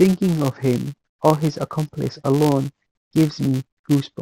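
From start to finish, the speech carries a filter restarted on every block fault: a filter discards its memory at each block boundary and starts again from silence, leaving a small transient every block. Repeating at 200 Hz, these ticks merge into a buzz, which points to blocks 5 ms long. Unlike mains hum, which holds a steady level, this buzz rises and falls with the speech and disappears in the pauses.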